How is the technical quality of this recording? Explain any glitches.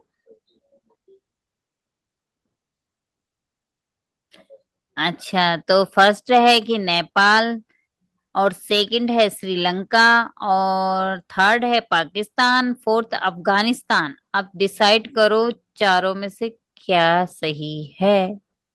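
No technical glitches can be heard in the recording; the signal stays continuous and intact throughout, with nothing interrupting or damaging it.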